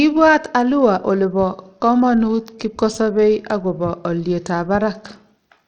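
Speech here has likely passed through Bluetooth SBC compression at a very low bit pool, which fits roughly 80 kbps. Throughout, the starved upper sub-bands leave nothing above 17.5 kHz, the remaining treble flickers, and a plainly audible gritty, aliased roughness rides on the sound.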